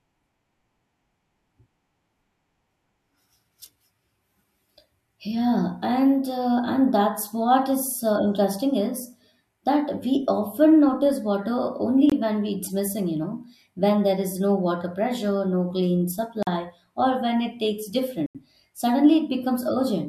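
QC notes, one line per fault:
12.10–12.12 s, 16.43–16.47 s and 18.26–18.35 s, block of digital silence: the speech drops to silence for 21, 43 and then 85 ms, each gap twice the last, which fits buffers of 1024, 2048 and 4096 samples not being filled in time. The cut in and out is abrupt, with no fade. The longest gap sounds like a small hole. Unlike a fade-out or concealed packet loss, nothing fills or smooths the gap.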